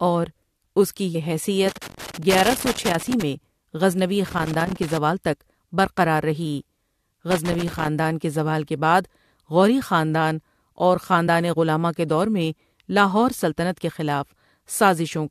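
At 1.14 s there's a quick glitch from damaged data in the compressed stream: a frame got corrupted, the decoder lost sync and skipped ahead to the next valid header. It happens again at 11.26 s, another brief blip.

Between those you get loose connector crackle, at 1.69 to 3.23 s, 4.27 to 4.97 s and 7.31 to 7.88 s. A dodgy contact is making and breaking as it moves, chopping the signal into irregular bursts of scratchy crackle.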